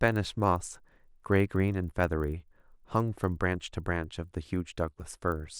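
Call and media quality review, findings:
Resampler restarted on every block, throughout the speech: a 25 Hz ticking buzz riding on the signal and gone in gaps. Points to the 24 kHz to 48 kHz converter resetting every 40 ms, leaving an edge error at each block boundary.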